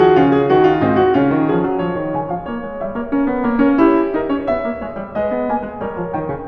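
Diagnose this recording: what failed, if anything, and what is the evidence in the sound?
Nothing in the music points to a failure at any stage of the chain, so there is no fault to diagnose.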